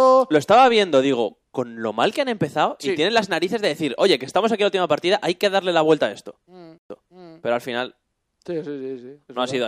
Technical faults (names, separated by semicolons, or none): stream reconnect